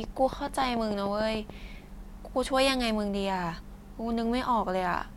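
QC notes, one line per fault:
0.04–1.51 s, train of clicks: a regular ticking at about 6.9 clicks per second, roughly ten near-identical pops standing well above the speech, around 10 dB louder at their peaks. Repeated pulses like these likely come from nearby equipment interference or a faulty connection or power supply.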